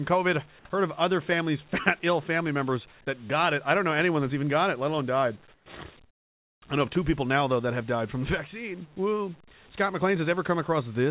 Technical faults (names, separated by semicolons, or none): comfort noise in place of the background